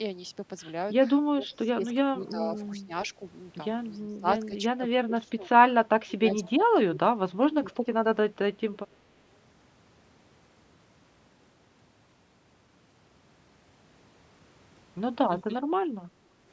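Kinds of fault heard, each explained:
Speech suppressed in double talk: in three stretches, 1.32 to 3.21 s, 4.0 to 7.67 s and 15.4 to 15.63 s, the talker's level dips by up to about 20 dB, likely because the echo canceller, facing both sides at once, turned down its own talker with the echo.
Echo leak: faint copies of the voice return 348 ms late, about 25 to 35 dB below the speech, at 2.28, 6.43, 7.71 and 8.75 s, likely loudspeaker sound that an echo canceller failed to remove from its microphone and sent back.
Background gated by the echo canceller: from 16.11 to 16.41 s the room sound drops by about 6 dB while the loudspeaker plays, as the canceller pulls the microphone down hard, then the background returns once the canceller lets go.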